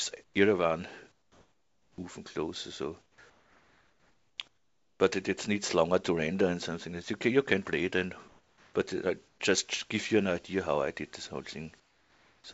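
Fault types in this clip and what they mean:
Comfort noise in place of the background: The sending side likely stopped transmitting during quiet stretches, and the receiver filled each pause with synthetic noise roughly matched to the background. Across six pauses, lasting from 0.1 s to about 1.8 s, the real background gives way to a flat, featureless hiss, usually about 3 to 8 dB quieter than the ambience around it. The level drop and loss of texture make the gaps sound artificial until the sound returns.
Onset clipped by the voice detector: The sender's voice detector was likely a little late to register that sound had resumed, so the first moments of it never went out and comfort noise was played in their place. At 1.95 s, as the longest early pause ends, about 30 ms of the onset is missing. The sound starts abruptly, without its natural soft beginning, and jumps straight out of the synthetic hiss.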